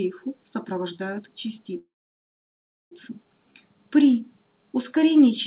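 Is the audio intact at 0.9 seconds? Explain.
Yes, the audio is intact at 0.9 s: nothing drops out, clicks or distorts there, and what is audible is the narrowband character of the call path, with nothing above 4 kHz, as expected from a G.711 A-law codec running at 64 kbps.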